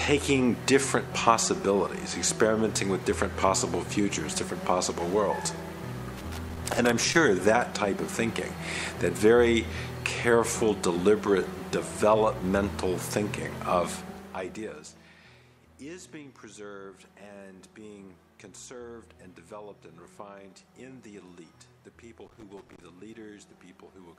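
The audio has two kinds of fault. Loose connector crackle appears twice, from 6.17 to 7.15 s and from 22.25 to 22.82 s. Each burst is an irregular scratching crackle. A worn or dirty contact is making and breaking as it moves. That chops the signal into fragments. Any DC on the line turns each break into a small pop. From 13.85 to 15.16 s there is zipper noise. The level drops by about 20 dB in visible steps, at around 30 steps a second. Each jump leaves a tiny click, so a fine ticking rides on the sound while the level falls. The gain is changing in coarse increments with no smoothing between them.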